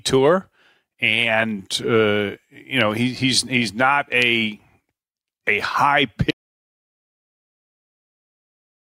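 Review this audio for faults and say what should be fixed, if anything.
Audio dropout to silence from 6.31 s to the end, after "a high": the waveform goes flat and the spectrogram goes blank with no room tone, likely a lost input. Monitor the input live and secure cables or wireless links so a dropped signal is caught and re-recorded.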